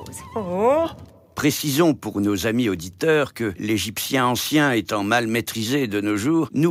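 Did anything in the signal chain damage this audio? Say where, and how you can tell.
No, nothing in the chain has left audible damage on this recording. At no point does any stage, from capture through to playback, leave a mark that can be heard.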